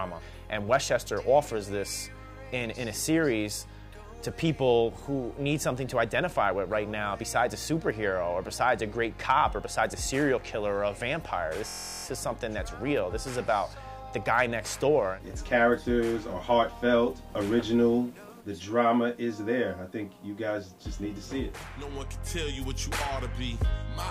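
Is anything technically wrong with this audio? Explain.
Yes, there's one problem. From 11.68 to 12.05 s there's a system hang loop: the system froze while the hardware kept replaying a 23.22 ms chunk, which fits a 1024-sample buffer. It repeats 16 times and comes across as a steady buzz at 43.1 Hz.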